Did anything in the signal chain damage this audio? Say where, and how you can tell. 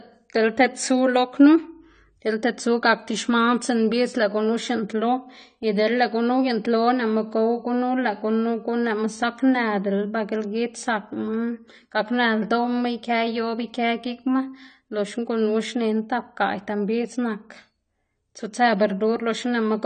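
Yes, at the codec stage. The speech has nothing above 9 kHz and fizzy, warbling sibilants throughout, unlike a clean low-pass filter. This is likely AAC compression at about 32 kbps.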